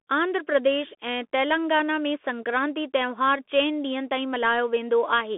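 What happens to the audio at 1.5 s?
At 1.5 s the speech carries Bluetooth CVSD headset codec damage, as it does across the whole clip. Nothing passes above 3.8 kHz. The one-bit adaptive stepping can't track loud high sounds, so s sounds turn scratchy over a granular hiss, which fits a 64 kbps CVSD link.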